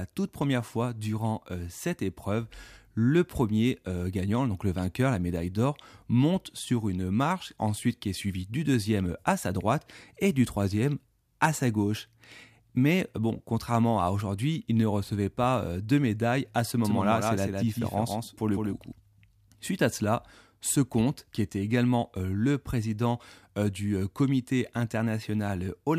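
From 16.85 to 18.93 s, just after "de médaille à ce", the speech gains a dry, slapback-like double: a full-band copy trailing by roughly 150 ms, a few decibels quieter, switching on and off abruptly. This doubled audio track likely comes from a second, slower capture path mixed in.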